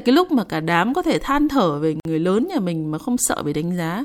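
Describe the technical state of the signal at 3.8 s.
At 3.8 s the speech signal is intact, with no audible fault at that point.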